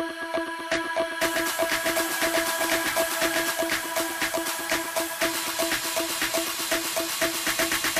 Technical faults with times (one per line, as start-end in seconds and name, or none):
0.77-3.51 doubled audio track